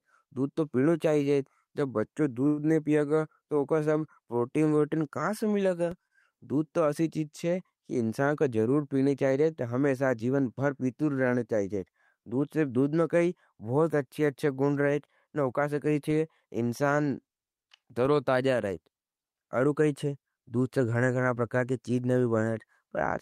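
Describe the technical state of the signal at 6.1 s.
A late packet emptied the jitter buffer from 6.07 to 6.12 s, a short stall: the receiver stretched the last sound for 28 ms, holding it slightly too long with a slight buzz or dip, nothing lost.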